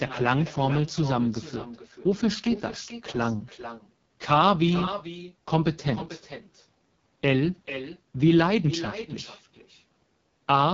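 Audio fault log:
throughout, echo with no canceller: the far end's loudspeaker leaks into its microphone unremoved, so the speech returns roughly 0.4 s later, about 12 dB quieter and thin.
throughout, AMR wideband (HD Voice) codec: heavy coding, fitting the codec's lowest rate near 6.6 kbit/s, leaves the speech rough and raspy, with nothing above 7.5 kHz.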